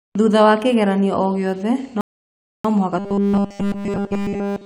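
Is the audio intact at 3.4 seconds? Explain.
No, at 3.4 s you're inside a stretch of robotic sound from repeated short buffers, running from 2.99 s to the end. It's likely the playback repeating a roughly 5 ms chunk, which gives a rigid, metallic 200 Hz buzz that only loosely tracks the speech.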